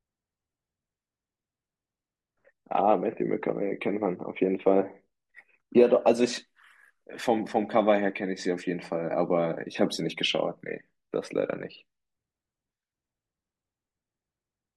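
Nothing in the recording stood out as a technical fault on listening.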